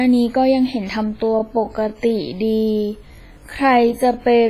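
Throughout, heavy WMA compression, likely from a low-bitrate encode around 24 kbps, leaves washy, ringing smear, nothing above 15.4 kHz, and hiss that breathes with the speech. From 1.07 s to the end, a time-stretched section drags at 0.61 times the pace while pitch holds steady, which points to stretching rather than slowed playback.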